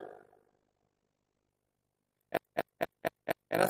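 The audio carries an overlap-add ripple throughout: it was split into windowed frames and rejoined with an overlap that does not sum to constant gain, so the level swings by about 60 dB once per frame. This produces a metallic buzz at around 50 Hz. From 0.48 to 1.57 s there is a call bitrate drop. The top end collapses from 20 kHz to 8 kHz and the sound turns coarse and muffled for about 1.03 s at its worst, which fits an Opus encoder forced from about 32 kbps down to 9 kbps after the bandwidth estimate fell. From 2.37 to 3.56 s the audio behaves like a CD stuck on one turn: a scratch keeps throwing playback back to the same spot, so a 0.24 s segment repeats five times in an even, rapid stutter.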